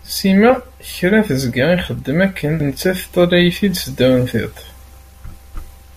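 At 0.50 s and again at 2.60 s the speech is broken by a brief glitch, the sign of damaged data in a compressed stream. Corrupted bytes reach the decoder, which misreads that frame and resyncs at the next header, so the garbled frame comes out as a short glitch. A plain dropout gives silence or a dull click, and clipping adds harshness on loud peaks. These events point to damaged data in the compressed stream.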